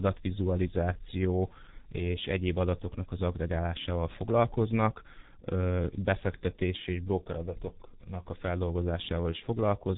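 Speech, and the whole clip has been squeezed through the G.723.1 codec at what sounds like about 6 kbit/s. There's nothing above 3.8 kHz, so it's muffled, and the slow 30 ms frame updates leave the voice hoarse with smeared consonants throughout.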